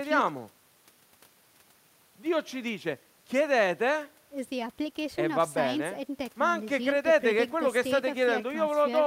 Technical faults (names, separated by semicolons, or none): none